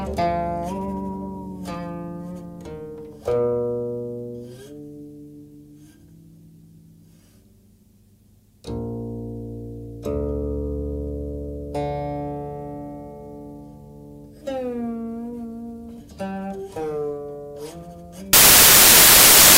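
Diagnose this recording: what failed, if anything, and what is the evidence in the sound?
At 18.33 s the sound abruptly gives way to loud, harsh broadband noise that continues to the end at 19.58 s. The failure is in sample-format conversion: samples built from the wrong bytes. The reader is assembling each sample from misaligned or swapped bytes, so the rapidly varying low-order bits land in the most significant position. The result is loud, harsh noise.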